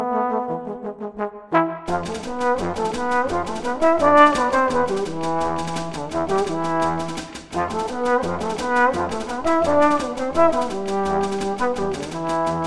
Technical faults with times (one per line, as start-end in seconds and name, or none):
none